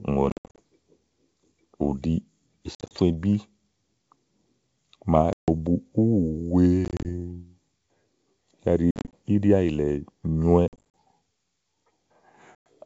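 Packet loss on an ADPCM call breaks the speech at 0.30–0.60, 2.75–2.95, 5.33–5.49, 6.85–7.09, 8.91–9.14, 10.68–10.84 and 12.55–12.66 s. Each time about 110 to 220 ms goes missing, mostly as scattered silent gaps of up to 70 ms, though at 5.33 s a solid 150 ms hole appears. Lost packets leave the decoder's predictor and step size out of step with the sender's. After each hard-edged hole the wideband G.722 sound comes back with slight distortion that settles within tens of milliseconds. Plain dropouts resume cleanly, and concealment would fill the gaps.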